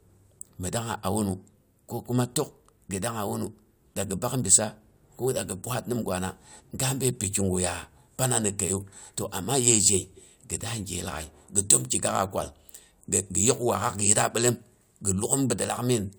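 No technical faults are audible anywhere in this recording.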